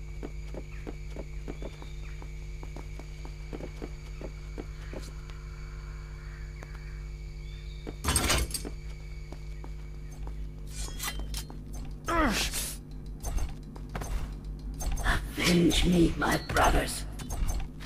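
No technical faults occur at any point in the audio, so there is nothing to describe in time order.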